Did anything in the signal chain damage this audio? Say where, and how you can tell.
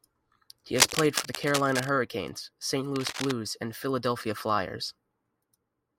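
Yes, cable scratch noise in the analogue wiring, from 0.75 to 1.92 s and 2.96 to 3.32 s: dense, uneven rustling over the speech, likely a worn contact shifting resistance, unlike isolated digital clicks.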